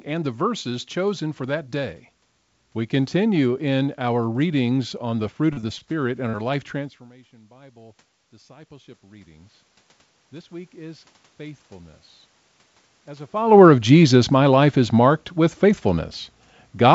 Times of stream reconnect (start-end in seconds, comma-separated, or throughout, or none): none